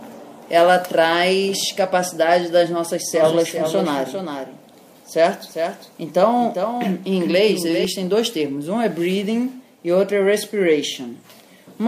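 From 3.15 s to 7.85 s, a doubled audio track appears. A second full-band copy trails the original by around 400 ms, roughly 5 dB quieter, with no decay or room colour. It likely comes from a slower second capture path. It starts and stops abruptly.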